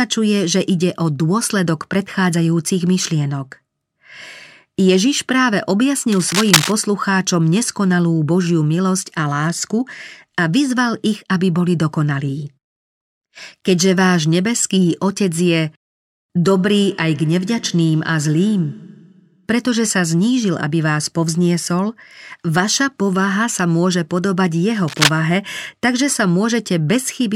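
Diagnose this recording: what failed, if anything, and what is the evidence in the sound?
Cable scratch noise, analogue wiring: rough scratching bursts at 6.12–6.72 s and 24.88–25.13 s, roughly as loud as the speech. Likely a worn connector's contact resistance fluctuating.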